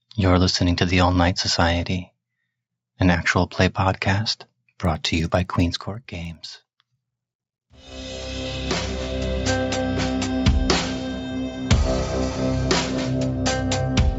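From 4.8 to 7.95 s the audio carries a steady 20 Hz tick, a resampler restarted on every block: each 50 ms block of the 16 kHz to 48 kHz conversion has a small error at its edges. Unlike dropout clicks, these are evenly spaced, leave no gaps, and occur only with signal.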